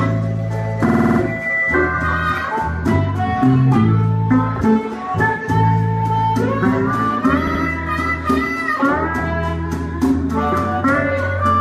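Repeated frames at 0.88 to 1.19 s and 7.46 to 7.62 s: a short block of compressed audio was written out again and again, so the decoder replays it. The first stutters on a 52 ms slice, played six extra times and adding 0.31 s. The second loops a 78 ms slice twice more, adding 0.16 s.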